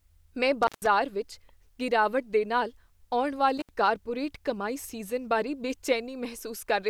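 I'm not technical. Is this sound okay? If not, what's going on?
No. Intermittent contact at 0.63–0.87 s, just before "ਵਿੱਚ ਗਿਰਾਵਟ", and at 3.58–3.69 s, between "ਨਾਲ ਆਉਣ" and "ਕਾਰਪੋਰੇਟ ਕਮਾਈ". A loose cable or plug briefly loses connection, so the speech drops out for about 0.15 s and 0.07 s, with a crackle as it breaks and reconnects.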